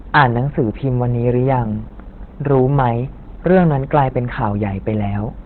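Opus compression runs through the whole of this speech clip: nothing survives above 4.3 kHz, and the voice has the muffled, hoarse narrowband character of the encoder's speech (SILK) mode, with heavy codec damage throughout. That points to a very low bitrate, around 12 kbps, as the likely cause. At that rate the encoder gives up the upper band entirely and spends its few bits on a coarse model of the voice. Hard clipping occurs at 0.15–0.38 s, 2.51–2.90 s and 3.47–4.02 s. In each stretch the waveform peaks were driven past what a stage could pass and sliced flat, adding harsh harmonics. The first burst is the worst, at about 13 dB of overdrive, and gives a rough fuzz on the loud sounds. The third, at about 6 dB, is milder. The second, at about 3 dB, is a lighter crackle on the peaks.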